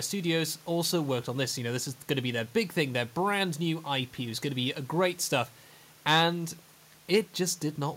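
Speech recording with no technical faults; the room's background noise sits about 30 dB below the voice.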